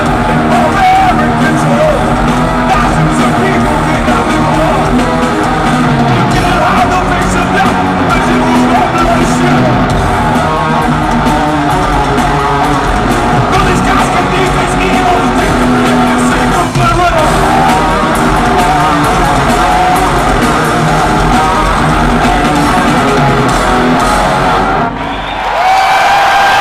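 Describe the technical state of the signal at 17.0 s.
Hard clipping is present at 17.0 s, as it is across the whole clip. The signal is driven about 2 dB past what a stage can pass, so roughly one sample in seven has its peak cut flat. Those flattened tops add harmonics high in the spectrum, heard as distortion on the loud parts.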